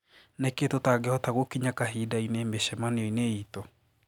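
No technical faults are audible.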